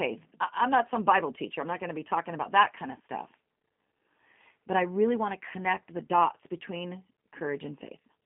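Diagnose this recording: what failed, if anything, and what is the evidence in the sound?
What failed is the codec stage: the whole speech track has been through a G.729 codec. Nothing survives above about 3.5 kHz, the band sits inside a 150 Hz to 3.4 kHz phone line, and the voice sounds rough and synthetic, which fits an 8 kbit/s G.729A encoder rebuilding speech from a vocal-tract filter and sparse pulses.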